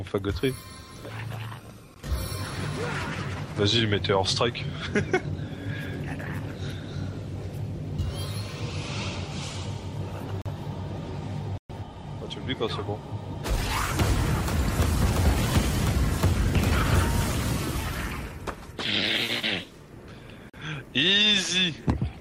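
The audio drops to blocks of digital silence four times: a 16 ms gap at 1.94 s, 40 ms holes at 10.42 and 20.50 s, and a 120 ms gap at 11.58 s. The hard cuts to zero point to the output buffer not being filled in time.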